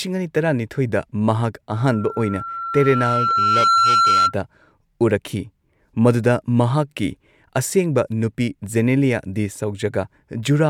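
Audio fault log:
1.73 to 4.35 s, loudspeaker feedback squeal: a pure tone at 1.4 kHz creeps in under the speech and swells over about two seconds until it sits a few dB above the talker, then stops at 4.35 s. That's the mic hearing its own loudspeaker; at 1.4 kHz the loop gain tipped past one, so each pass round the loop made that frequency louder until the loop was broken.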